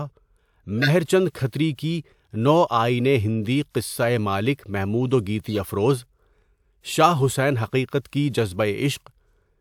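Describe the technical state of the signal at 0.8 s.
A corrupt frame decoded from 0.80 to 0.90 s: flipped bits in a few compressed frames were played anyway, misplacing energy across frequencies as a loud, brief chirp, squeak, blip or burst of noise.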